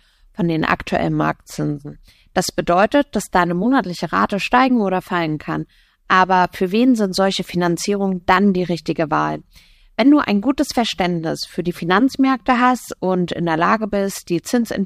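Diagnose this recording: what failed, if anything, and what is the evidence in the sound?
Nothing failed; no audible fault anywhere in this speech.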